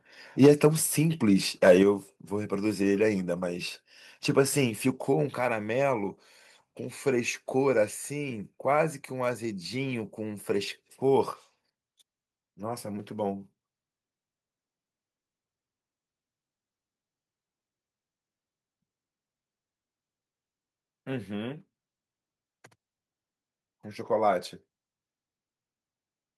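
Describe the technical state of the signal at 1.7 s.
A harsh, crackling edge cuts into the speech from 1.66 to 1.72 s, with peaks flattened and a few percent of samples pinned at the converter's limit. This is likely microphone overload: the input is driven about 4 dB past the converter's limit, so the waveform tops are sheared off.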